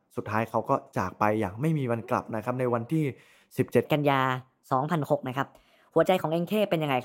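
A section at the wrong speed runs from 3.85 s to the end of this speech clip at 7.05 s. It plays 1.22 times too fast, so the voice turns hurried and about three semitones higher, likely because that stretch was fitted to the wrong clock.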